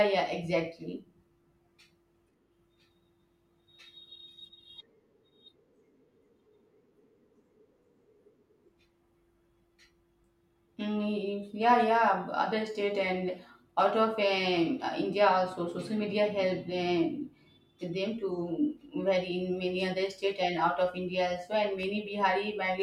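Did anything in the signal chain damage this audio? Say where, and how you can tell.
Yes. There's a block of digital silence near the end of the speech at 21.83 s, heard as a single sharp tick. The hole lasts only 0.73 ms, which fits a 32-sample buffer going out unfilled at the driver or buffer stage, with hard edges.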